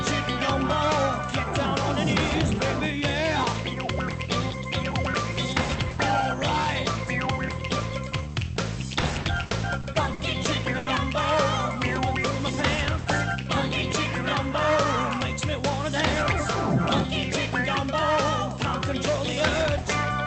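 From 9.01 to 10.22 s, repeated stalls (stutter): the jitter buffer ran dry five times, concealing 170 ms (longest 60 ms) by extending earlier sound, so the audio drags unevenly. At 10.78 to 10.89 s comes a short stall from a late packet: a 90 ms delay is bridged by holding the previous sound, producing a brief smeared sustain.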